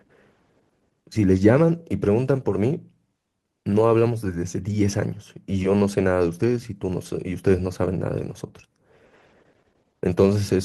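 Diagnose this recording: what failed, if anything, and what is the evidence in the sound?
Nothing failed here; the recording sounds the way a healthy chain should, with no stage giving any sign of trouble.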